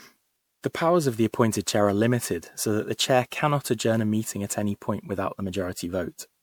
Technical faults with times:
0.00-6.43 generation loss

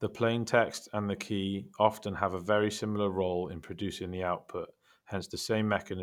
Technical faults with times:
2.04 dropped samples
3.46 dropped samples
5.10 dropped samples

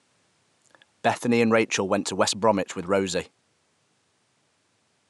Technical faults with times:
none

